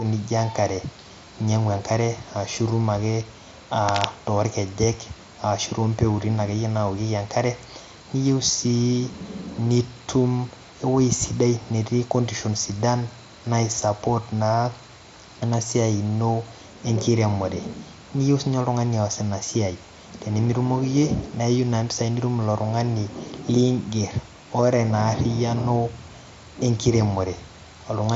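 At 3.89 s there's a burst of cable scratch noise lasting until about 4.10 s, roughly a fifth of a second of dense, ragged crackle sitting over the speech. It's loud, only about 5 dB under the talker, so it jumps right out. It sounds like a worn cable or connector was likely nudged, making the contact resistance flicker. All of this comes through a top end that stops near 7.7 kHz, which fits a wideband Bluetooth headset link.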